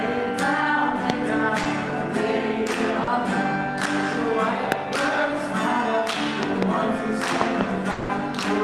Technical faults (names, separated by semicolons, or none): loud pop; short concealed packet loss; long network dropout